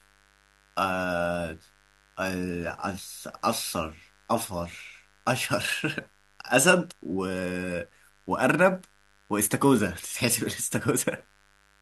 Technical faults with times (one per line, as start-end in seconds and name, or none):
0.00-11.81 mains buzz